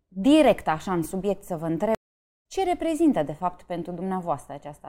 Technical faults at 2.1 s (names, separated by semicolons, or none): stream reconnect